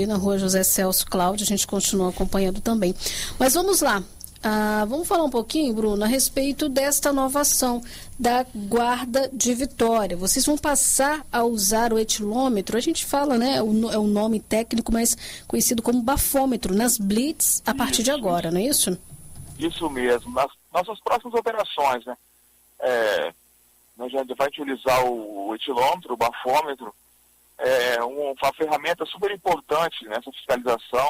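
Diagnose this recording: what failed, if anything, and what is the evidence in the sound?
Nothing here points to a failure at any stage of the chain, so there's nothing to diagnose and no evidence of anything having gone wrong.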